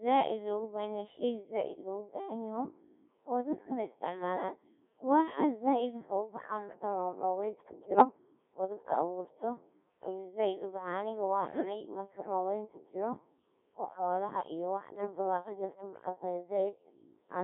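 The whole recording has passed through the Codec 2 vocoder, and the heavy damage points to its 1.3 kbit/s mode. Instead of the waveform, the codec keeps only pitch, voicing, energy and a coarse spectral envelope. The speech is then rebuilt from sine waves inside a narrow band of about 150 Hz to 3.6 kHz. The result is speech that sounds robotic and buzzy throughout, with a flat, synthetic timbre and no natural breath or texture.

Bit errors on digital voice radio strike twice. From 7.84 to 8.05 s, just after "marka roowraydka", corrupted bits reach the decoder at a high error rate of several percent, which fits about four damaged frames. Because each bit controls a whole frame's pitch, level or spectrum, the voice lurches in pitch and loudness and breaks into warbling, bleeping gibberish. The same happens from 11.48 to 11.65 s, just before "uma kiir", at a slightly lower error rate, with another brief burst of robotic garble.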